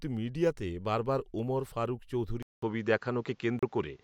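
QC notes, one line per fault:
2.43–4.03 s, input switched to a poorer device: right after "মিডিয়াতে বারবার ওমর ফারুক", a 200 ms gap, then duller, narrower sound with nothing above 7.6 kHz, a level shift of around 5 dB and a new noise floor roughly 45 dB down. This is likely a change to a lower-bandwidth microphone.
3.59–3.63 s, Bluetooth stall: a 35 ms dropout to silence inside the switched section, after which the audio resumes. This is likely a wireless playback buffer running empty while delayed packets were resent, briefly halting output.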